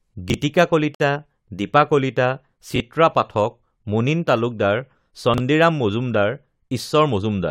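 Speech, with two kinds of fault. Chunks out of order occur at 0.30 to 0.34 s, 2.76 to 2.80 s and 5.34 to 5.40 s. At each, a 20 ms block of audio arrives late and plays after the one block (at the last event, two blocks) that should follow it. Nothing is lost, but the sound jumbles briefly. There is also a gap at a join of encoded pieces at about 0.95 s. A silence of about 54 ms cuts into continuous speech, with smeared edges. It fits separately encoded segments joined without trimming the encoder's start delay and end-of-frame padding. The speech then resumes where it stopped.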